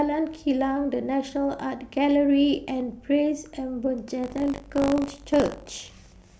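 From 4.22 s right through to the end, the speech picks up buffer tearing: a steady robotic rattle at 50 Hz, which fits a 20 ms buffer period. The app writing the ring buffer and the hardware reading it have drifted out of step, so they cross inside every period. A small sliver of each buffer, a few percent, plays audio from around 70 ms earlier, with hard joins on both sides, and the buzz rides along only where there's signal.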